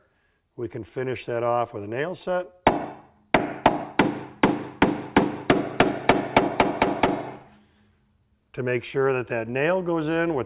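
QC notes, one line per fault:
No faults heard anywhere in this audio.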